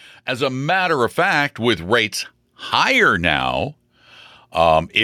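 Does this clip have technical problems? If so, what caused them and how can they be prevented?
Yes. From 0.27 to 2.18 s the speech and the background swell together by about 4 dB, up to just before "higher now". That is automatic gain rising: the AGC judged the input too quiet and ramped its gain. Set a fixed input gain with AGC disabled.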